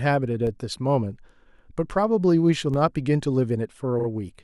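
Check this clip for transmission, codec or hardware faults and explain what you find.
Two kinds of fault appear in this speech clip: a pair of DC steps and one burst of repeated frames.

The DC steps fall at 0.47 s and 2.74 s. At each, the waveform's zero line suddenly jumps, as when a converter recalibrates or an offset input is switched in. The offset then drains away along a curve matching a 20 Hz high-pass. Each step is a brief low thump under the speech. On a waveform the trace visibly lifts off centre and slides back; a spectrogram shows a faint burst at the very bottom of the frequency axis.

The repeated frames run from 3.99 s to 4.07 s. A stretch of about 40 ms of compressed audio is played again twice, adding 80 ms to the clip, which fits two repeated 40 ms frames. It is heard as a quick stutter. A spectrogram shows the same short pattern tiled side by side with vertical seams, and the waveform shows identical segments back to back.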